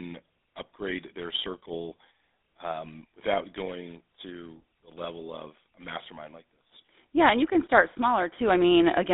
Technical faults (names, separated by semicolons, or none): GSM full-rate codec